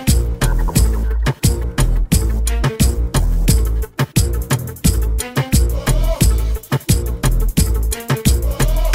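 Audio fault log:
Nothing stood out on listening to this audio.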